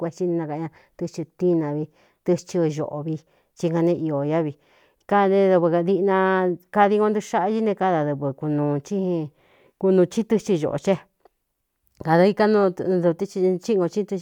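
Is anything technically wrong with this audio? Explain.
No, nothing technically wrong can be heard here.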